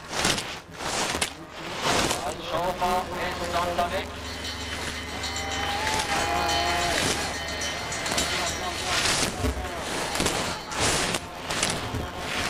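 Buffer tearing runs through the whole clip: a rattling 172 Hz buzz, fitting a 256-sample buffer, present only with signal, unlike random dropout clicks. About a fifth of each buffer repeats audio from around 20 ms earlier. From 6.01 to 6.09 s, a sudden drop of about 6 dB, rather than a gradual fade, points to one stereo channel likely dropping out briefly before the mono sum.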